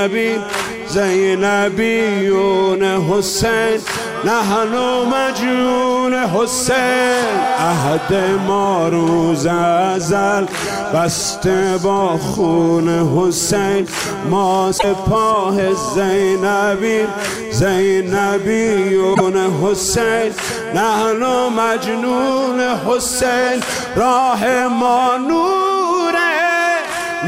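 At 14.75 s and again at 19.11 s, each lasting about a tenth of a second, the audio breaks into a short glitch, a chirp, squawk, click or short hole, caused by damaged data in a compressed stream. Corrupted bytes in the encoded file leave the decoder misreading frames and losing sync until it finds a valid header.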